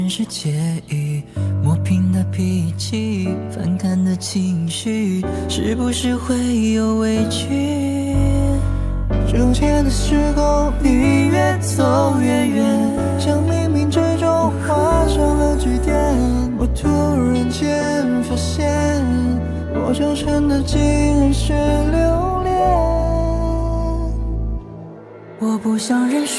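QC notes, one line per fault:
No faults heard anywhere in the clip.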